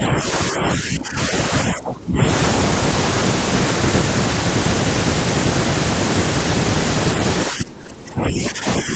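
From 0.51 to 2.2 s, and again from 7.46 s to the end, the speech dips by about 20 dB in patches, likely speech suppressed in double talk by an echo canceller ducking both sides.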